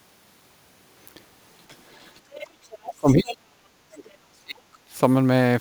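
Sample clock jitter runs through the whole clip. The converter's clock wanders by a few microseconds, so each sample lands slightly off time. The error follows the waveform's steepness, adding a faint hiss or roughness, roughly 30 dB down, on loud and bright passages that disappears in pauses.

Other side's voice leaking through appears from 1.68 to 2.48 s and again from 2.64 to 2.78 s: a second voice sitting well beneath the speech. It is likely loudspeaker playback that the echo canceller failed to fully remove from the microphone.

Speech suppressed in double talk follows from 2.8 to 4.76 s, with the speech repeatedly dipping and cutting out, at worst by around 40 dB, for about one and a half seconds in total. Within this stretch the leak returns, noticeably louder from 3.08 to 3.34 s and very faint from 4.05 to 4.11 s. With both sides active, the echo canceller likely could not tell the talker from the echo and attenuated everything.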